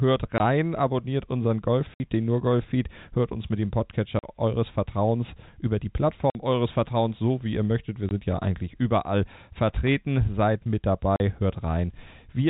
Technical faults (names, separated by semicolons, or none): packet loss filled with silence; loose connector crackle